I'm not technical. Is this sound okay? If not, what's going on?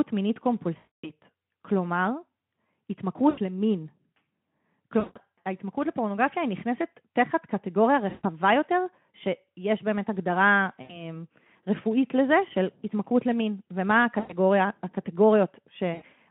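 No, there's VoIP packet loss concealed by the speech codec: at 0.77, 3.29, 4.99, 8.09, 10.81, 14.19 and 15.94 s, bits of audio went missing. The call software filled each gap by stretching the last sound, giving a brief buzzy or noisy, fading smear.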